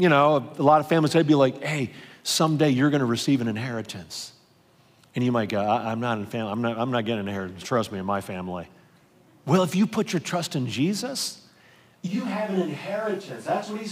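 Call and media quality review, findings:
Speech turns suddenly roomy and hollow at 12.09 s, thinner in the bass, roughly 10 dB quieter, and stays so to the end. Room noise rises to around 30 dB below speech. Switch to a distant microphone, likely after the close mic dropped out. The capture falls back to a mic far from the talker, so more reflections and ambience reach it relative to direct sound.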